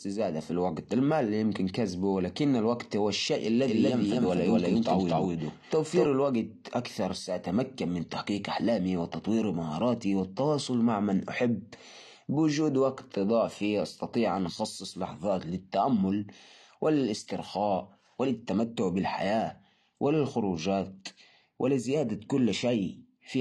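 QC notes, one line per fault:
Throughout: AAC compression. The speech sounds dull and smeared, with nothing above 12.1 kHz and plainly audible codec damage: warbling or fizzy texture on sustained sounds and sibilants. This fits AAC-LC at around 32 kbps, likely quantising frequency lines hard against a hearing model.
3.68 to 6.06 s: doubled audio track. A second full-band copy of the speech runs about 200 ms behind at roughly the same level, starting and stopping abruptly with no decay or room colour. Likely a second capture path or an edit holding two out-of-step copies.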